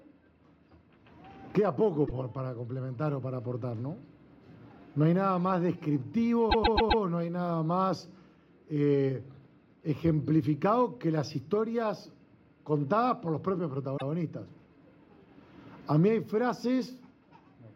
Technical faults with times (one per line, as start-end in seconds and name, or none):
2.05-2.12 repeated frames
6.49-7.02 repeated frames
13.96-14.09 repeated frames